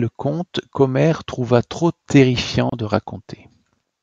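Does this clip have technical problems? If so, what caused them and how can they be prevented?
Yes. From 2.70 to 2.72 s, speech drops into a 28 ms gap and then resumes: a gap at a join of encoded pieces, caused by untrimmed encoder delay and padding. To prevent it, encode the recording in one pass or trim each piece's encoder delay and padding before joining.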